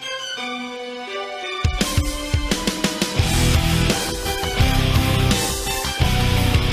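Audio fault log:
No faults were heard in this clip. Nothing in it calls for a timed entry in the log.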